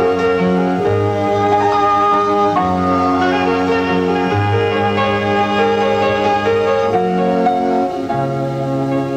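No technical faults can be heard anywhere in the audio.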